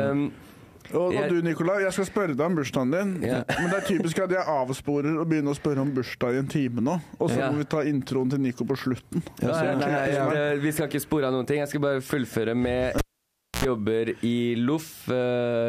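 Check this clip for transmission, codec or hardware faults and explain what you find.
One hardware fault turns up, a cable pulled and plugged in, between 12.98 and 13.65 s. A sharp pop cuts the sound to near silence for about 0.61 s. A short burst of mains buzz at 60 Hz follows, lasting roughly 84 ms, and a second pop brings the audio back. A live connector was pulled out and pushed back in. While only the plug's tip made contact, the unshielded signal line picked up hum before the full connection was restored.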